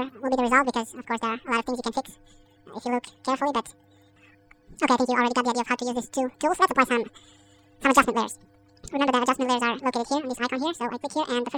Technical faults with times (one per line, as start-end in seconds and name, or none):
0.00-11.58 audio read two samples at a time (double speed)